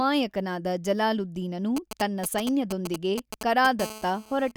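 A nearby 2G phone exchanging short groups of radio bursts is picked up and rectified by the audio circuitry from 1.77 to 3.81 s. These GSM signalling bursts sound like a galloping dit-dit-dit of brief 217 Hz buzzes, only slightly quieter than the speech.

At 3.81 s the phone settles into continuous call transmission, pulsing 217 times a second until 4.52 s. The rectified pulses become a steady GSM phone buzz, a hard, raspy 217 Hz tone rich in harmonics, about 15 dB below the speech and unrelated to it.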